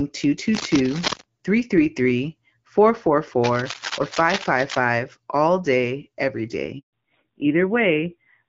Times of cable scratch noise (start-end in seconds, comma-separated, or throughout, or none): 0.53-1.24, 3.42-4.84